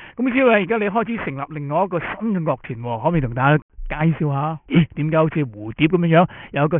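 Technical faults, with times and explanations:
throughout: aliasing. Gritty, metallic tones pile up toward 3 kHz, around 15 dB down; unfiltered highs folded back when the rate was cut, fitting 6 kHz sampling.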